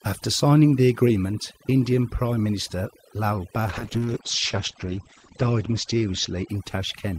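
From the start, the background sits in near silence with twinkling specks: overdone noise removal, suppressing bands near the noise estimate.

From 3.68 to 6.85 s the sound turns rough and muffled, with highs gone above 8 kHz. That points to a call bitrate drop, from about 40 to 10 kbps.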